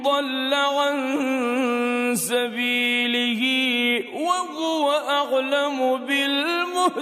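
Nothing in the audio stands out as a technical fault: there are no dropouts, glitches or other problems to point to at any moment.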